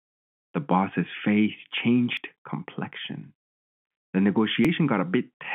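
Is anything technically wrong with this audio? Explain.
Yes. The sound skips twice, at 2.17 s, just after "boss's face", and at 4.65 s. Each time a small slice, roughly 30 ms, is gone and the two sides butt together with no gap, so the speech lurches forward slightly. This is audio missing between chunks: the likely cause is a recorder working in blocks of about 2.5 s and dropping a fragment at each handover. On a waveform you would see an abrupt discontinuity rather than a silent stretch, and on a spectrogram a thin vertical seam where the harmonic contours jump. The telephone-band coding around it, limited to roughly 150 Hz to 3.4 kHz, is audible as the narrow line sound.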